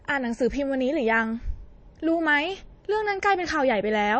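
MP3 compression damage runs through the whole of this speech recording, from start to finish, and is plainly audible. The likely cause is a heavily constrained MP3 encode. Nothing sounds above about 8.3 kHz, where the encoder has cut the treble at a fixed point to save bits. Below that, weak frequency lines drop in and out between frames, leaving coloured, unstable detail. Together these point to a low bitrate, around 32 kbps.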